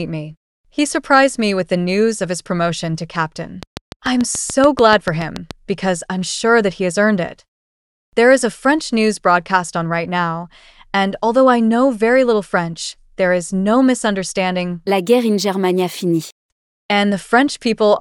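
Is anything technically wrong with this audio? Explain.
Yes. From 3.63 to 5.52 s there is a train of clicks: about fifteen sharp, near-identical pulses at a steady 6.9 per second, peaking roughly 15 dB above the surrounding audio. The likely cause is an external source injecting a repeating impulse, such as electrical interference or a faulty connection. It sounds like even ticking laid over the sound. A waveform shows evenly spaced spikes, and a spectrogram shows thin vertical lines across the whole frequency range.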